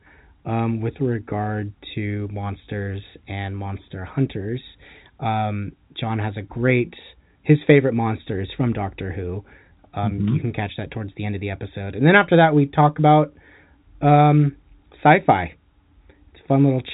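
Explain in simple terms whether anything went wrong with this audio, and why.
Nothing went wrong here: the speech was sent through ordinary G.711 telephone coding, which drops everything above about 3.8 kHz and gives it the familiar narrow sound of a phone call, exactly as that kind of line is meant to work.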